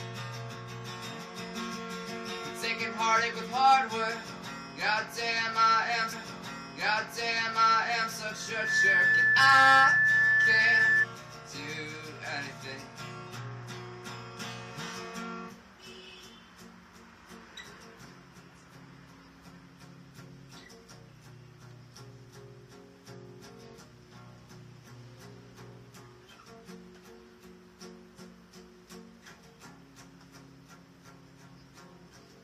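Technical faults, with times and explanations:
6.12 to 8.12 s, stream segment repeated: the player fetched or queued the same two-second stretch of the stream a second time, so the playback jumps back and plays that section again, adding 2 seconds to the running time. The seam where the stream rewinds is heard as a small blip at 6.12 s, and the material up to 8.12 s is heard twice in succession, an exact repeat rather than a natural echo.
8.39 to 11.06 s, loudspeaker feedback squeal: a microphone is picking up the loudspeaker it drives, and around 1.8 kHz the loop gain rises above one, so that frequency reinforces itself on each pass. It is heard as a single piercing tone that swells within roughly 0.4 seconds and then holds about 10 dB above the programme as a steady squeal, dominating the sound until it stops at 11.06 s.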